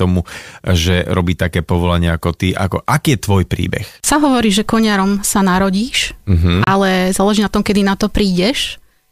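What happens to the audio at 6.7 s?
From 6.64 to 6.67 s the speech cuts to clean silence for about 31 ms and then resumes, likely a Bluetooth stall where delayed packets let the headphone buffer run dry, unlike a click.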